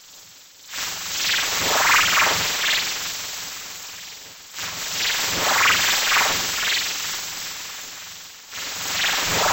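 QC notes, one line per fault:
Throughout, stereo read as mono: interleaved left and right samples are played in sequence as one channel, so the sound runs at 0.5x speed, 12 semitones low.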